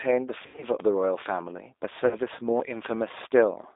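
Throughout, the G.729 codec at 8 kbit/s confines the speech to roughly 300 Hz to 3.7 kHz, sounding rough and synthetic; a spectrogram shows nothing above that band. From 0.46 to 0.67 s, VoIP packet loss concealed by the speech codec replaces about 120 ms of audio, scattered over 160 ms with an 80 ms longest gap. The decoder stretches the last sound into a fading buzz or coloured noise, seen as smeared, repeating harmonics and a sagging waveform envelope. At 2.07 to 2.18 s, a shorter 40 ms loss brings a brief smear and weak recovery afterwards.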